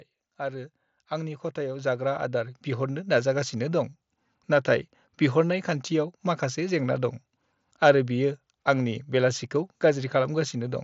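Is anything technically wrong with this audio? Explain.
Yes. From 0.38 to 3.65 s the speech and background swell together by about 11 dB. This is automatic gain rising: the gain control judged the input too quiet and slowly turned itself up. The band stops near 7.7 kHz with light graininess, which fits the mSBC Bluetooth headset codec.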